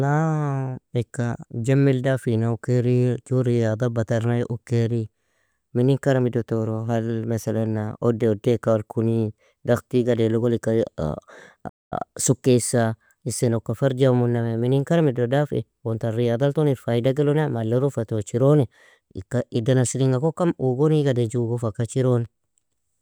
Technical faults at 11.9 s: playback stall

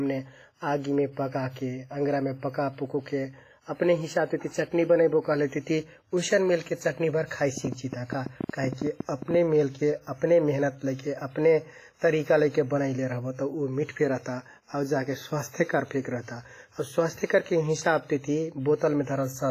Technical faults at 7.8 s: WMA compression; train of clicks

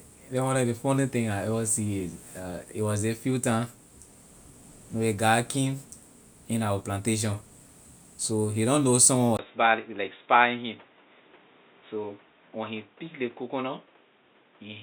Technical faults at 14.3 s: input switched to a poorer device

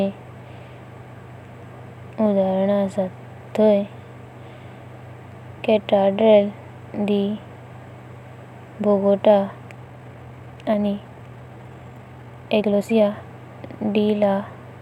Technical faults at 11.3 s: time-stretched section

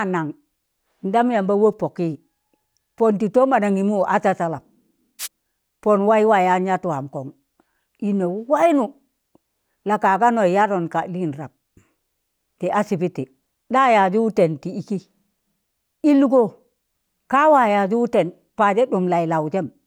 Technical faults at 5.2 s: wireless microphone noise hit

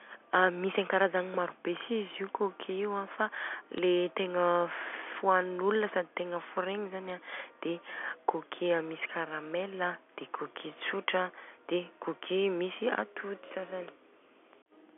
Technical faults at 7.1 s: bit errors on a digital phone line

